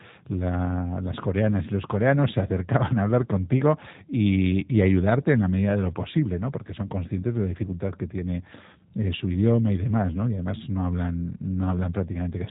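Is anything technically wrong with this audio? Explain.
Yes. G.729 codec coding, throughout: the speech is rebuilt from a vocal tract filter, pitch predictor and sparse pulses, which fits 8 kbit/s, leaving nothing above 3.8 kHz and a plainly rough, synthetic edge.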